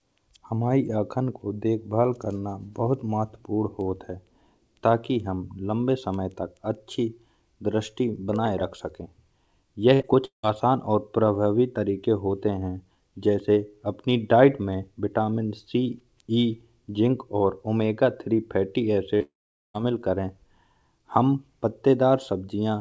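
From 9.94 to 10.02 s the speech turns into a short held sound that fades before picking up further on. This is a burst of packet loss: about 60 ms never arrived, and the receiver stretched the last sound to cover it. Right after, from 10.02 to 10.05 s, a brief smear marks a short concealed packet loss. About 20 ms was missing and patched by continuing the preceding sound before blending back into the real audio.

From 10.25 to 10.45 s the sound fades into roughly 120 ms of silence and resumes with about 180 ms gone, likely a long network dropout in which the receiver's extrapolation ran out and left nothing to play.

After "और ओमेगा तीन फैटी", from 19.17 to 19.22 s, another wobble-like smear covers about 40 ms of lost audio, again a short concealed packet loss. It leads straight into a longer gap from 19.22 to 19.76 s: a fading tail, then about 430 ms of silence, with about 520 ms of speech never heard. 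That is likely a second long network dropout. Throughout, the speech band stops at 8 kHz, which fits the G.722 call codec on this WebRTC path.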